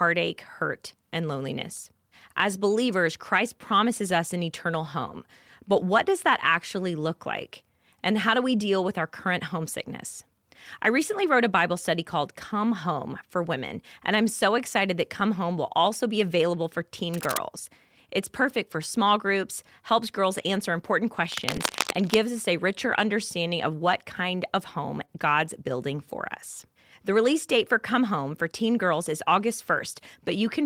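At 12.21 s, a lost packet rebuilt from error correction gives about 20 ms of rougher, noisier sound with no gap. On a spectrogram it shows as a brief grainy smudge.

From 17.14 to 17.38 s, after "also be available for", cable scratch noise, likely from a worn connector being moved, adds dense, ragged bursts nearly as loud as the speech. These appear as spiky broadband streaks on the waveform. The scratching returns from 21.32 to 22.14 s.

Within it, at 21.55 s after "helps girls answer important", another 20 ms rebuilt frame sounds grainy. A third follows at 25.01 s, after "what kind of home".

From 25.05 to 25.10 s there is a short concealed packet loss. About 20 ms never arrived and was filled by extending the preceding sound, heard as a brief smear. The spectrogram shows a smoothed, repeated pattern there.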